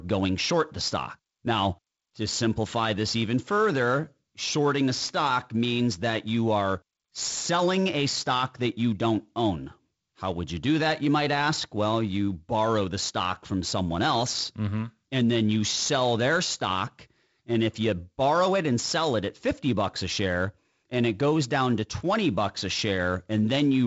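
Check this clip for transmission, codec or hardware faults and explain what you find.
There is one fault, and it runs through the whole speech clip: sample clock jitter. The converter's clock timing wanders by something on the order of 7 microseconds, so each sample is taken a little early or late at random. The resulting error follows the waveform's slope and sits roughly 25 dB below the signal. It is heard as a hiss or roughness that grows on loud and high-frequency sounds and disappears in pauses. That tracking is what separates it from an ordinary noise floor or background hiss, which would stay audible in the gaps.

The G.722 wideband telephone coding is working normally. Its band limit is audible, with nothing above about 7.7 kHz, and the codec's own damage is light. Those traits are consistent with the 48 kbit/s mode, where the lower band carries fewer bits.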